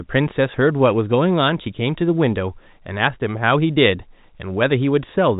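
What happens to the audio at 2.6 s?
Nothing goes wrong at 2.6 s; the speech carries straight through that moment intact, with the same narrow telephone-band sound as G.711 coding gives it throughout.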